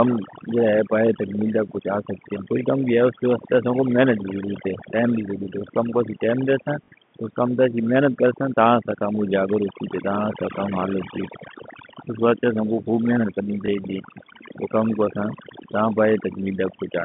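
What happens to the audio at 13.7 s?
Right after "کو خوب محنت کرنی", from 13.66 to 13.68 s, there is a brief packet loss with the last packet repeated. About 20 ms of audio, consistent with a single lost 20 ms packet, was replaced by a replay of the packet before it. The copy likely does not line up with the pitch cycle, and the single repeat sounds like a small blip. On a waveform this appears as a short repeated segment.

The overdone noise removal that runs through the whole clip is also present at this moment. The noise reduction is pushing individual frequency bands down whenever they sit near its noise estimate. The gaps around the speech fall to near silence with twinkling specks. On a spectrogram the background looks almost empty, scattered with isolated bright dots, and the weaker parts of the speech appear ragged and broken into patches.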